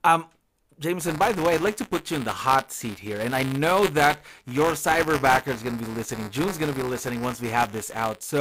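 From 1.00 s to the end at 8.40 s the speech carries buffer tearing. The application writing the playback ring buffer and the hardware reading it have drifted into overlap, so each period plays a small slice of audio from roughly 20 ms earlier, spliced in with abrupt joins on both sides. The result is a steady robotic buzz at about 188 Hz, which fits a 256-sample buffer, riding on the speech.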